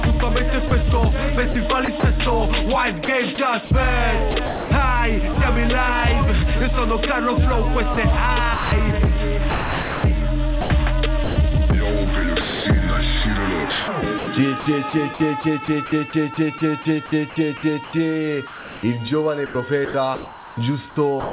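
The audio passes through a narrowband call path with nothing above 4 kHz, which fits G.711 coding. Sound dropped by the voice detector occurs at 0.68 to 0.71 s and 12.41 to 12.65 s: about 30 ms and 240 ms of signal give way to flat comfort noise, likely because the sender judged it background. On a spectrogram these look like abrupt, uniform low-level noise blocks. Sound chopped by the voice detector, likely from the sender's detector switching on and off, appears at 1.52 to 2.03 s, 3.05 to 5.36 s, 7.94 to 11.36 s and from 13.7 s to the end, with roughly 90 ms, 420 ms, 960 ms and 1.96 s respectively replaced by synthetic noise. The waveform shows repeated gating, with sound and flat noise alternating.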